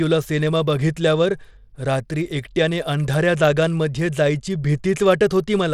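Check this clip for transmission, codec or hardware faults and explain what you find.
One codec fault runs through the whole clip, most likely Bluetooth SBC compression. A starved bit budget leaves the top sub-bands nearly empty and coarsely quantises the rest, so the speech turns plainly gritty and cuts off above 17 kHz. The damage fits a low bitrate around 96 kbps.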